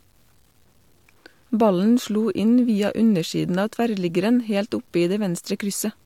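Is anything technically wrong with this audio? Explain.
Yes. Throughout the speech, the sound shows low bit depth without dither. The likely cause is that the audio was truncated to a coarse word length, consistent with about 9 bits, with no dither added first. Because the rounding error tracks the waveform rather than forming steady hiss, quiet syllables and decaying word endings turn gritty and grainy. The distortion sits roughly 40 dB below the speech and changes character as the level moves.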